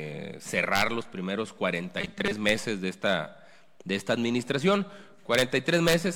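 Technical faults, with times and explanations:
1.99 to 2.33 s, robotic sound from repeated short buffers: a rigid 200 Hz buzz, likely from a 5 ms chunk repeating over about half the audio.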